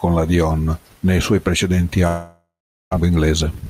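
A long network dropout runs from 2.07 to 2.95 s. The speech stops abruptly, and in its place the last sound is stretched into a fading buzzy hiss. That gives way to roughly 0.39 s of near-silence before speech resumes. About 0.6 s of speech is simply gone, and the most likely cause is a stall in packet delivery that the receiver could only paper over. The audio also comes back roughly a fifth of a second later than before.

A jitter buffer speed-up follows from 3.03 s to the end of the clip at 3.70 s. Having fallen behind after the gap, the receiver catches up by repeatedly cutting out short pitch-period-sized slivers of the signal, removing about a tenth of a second in total. The speech plays at about 112 % of normal speed with its pitch unchanged, so it sounds hurried rather than higher.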